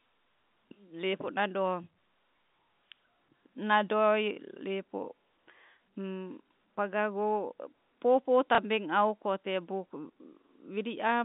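A receiver lost audio from 8.55 to 8.58 s in this telephone-band speech clip and covered the 30 ms gap with packet loss concealment that replayed the last packet it had received. The gap length fits a single lost packet. The single replayed packet sounds like a small blip. Throughout the clip, the telephone line limits the band to about 150 Hz to 3.7 kHz, carried by G.711 A-law coding.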